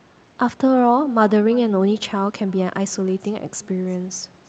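Across the whole clip the speech carries an echo with no canceller: a far-end loudspeaker feeds back into its microphone and returns each phrase roughly a third of a second later, about 23 dB down. Unlike room reverb, it is a distinct, thinner repeat rather than a smooth decaying tail, heard over a call path whose band stops near 8 kHz.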